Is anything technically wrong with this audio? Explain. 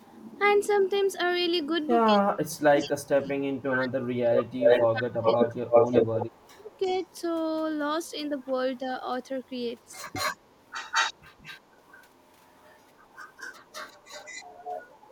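Yes, there are two kinds of fault, and they overlap in places.

Echo leak: a delayed copy of the speech trails the original. It is barely audible at 0.02–0.2 s and 8.06–8.79 s, faint at 2.79–3.08 s, and clearly present from 9.44 s to the end. From 4.35 to 7.21 s it is as loud as the speech itself or louder. The lag is 188 ms early on, 348 ms in the middle and 206 ms at the end. The likely cause is a far end playing the call on a loudspeaker, where the echo canceller failed to remove what its microphone picked up and sent it back.

Speech suppressed in double talk: between 2.08 and 5.28 s, the speech drops away in pieces totalling about two seconds, by roughly 25 dB at its deepest. It cuts out again for about half a second within 6.22–6.89 s, by roughly 30 dB. Both spans overlap the loudest stretch of echo. The likely cause is an echo canceller that could not separate the talker from the loudspeaker echo when both were present at once, so it turned both down.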